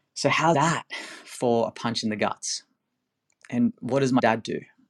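Damaged data in a compressed stream hits this speech twice: the decoder meets corrupted frames, loses sync and hunts for the next valid header. Each break sounds like a brief chirp or blip, first at 0.54 s, then from 4.18 to 4.20 s.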